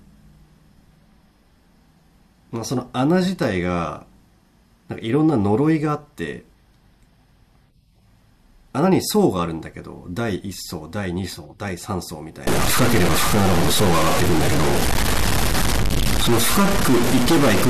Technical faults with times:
12.47-17.70 stuck bit

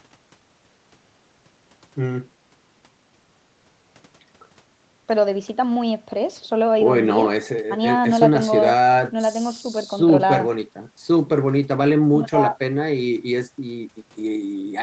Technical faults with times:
none

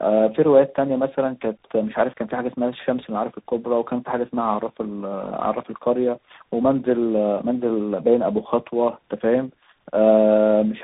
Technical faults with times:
0.00-10.84 tandem speech coding

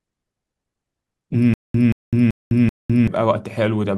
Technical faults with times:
1.54-3.08 stutter with silent gaps

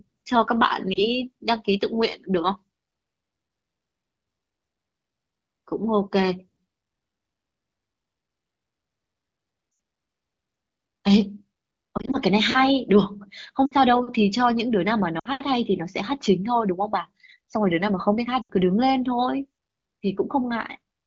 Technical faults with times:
0.93-1.07 lost AMR speech frames
9.71-9.79 lost AMR speech frames
11.97-12.17 lost AMR speech frames
13.66-13.74 lost AMR speech frames
15.19-15.28 lost AMR speech frames
18.42-18.52 lost AMR speech frames

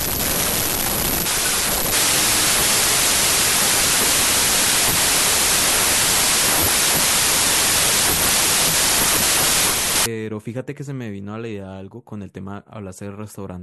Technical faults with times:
0.00-10.06 wrong sample width

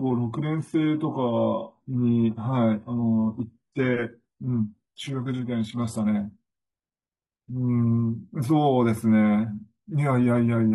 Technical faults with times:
0.00-6.00 adaptive stream starting at a low bitrate

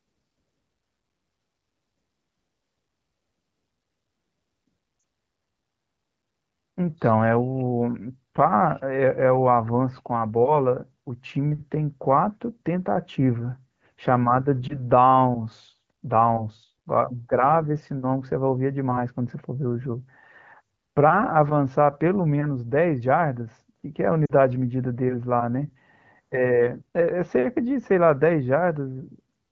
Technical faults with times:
4.99-5.03 lost AMR speech frames
14.67-14.78 lost AMR speech frames
24.25-24.33 lost AMR speech frames

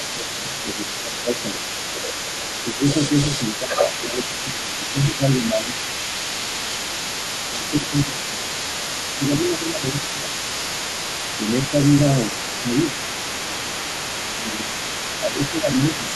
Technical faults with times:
0.00-16.15 other side's voice leaking through
0.14-1.76 speech suppressed in double talk
2.76-5.77 speech suppressed in double talk
7.25-10.31 speech suppressed in double talk
11.39-16.12 speech suppressed in double talk

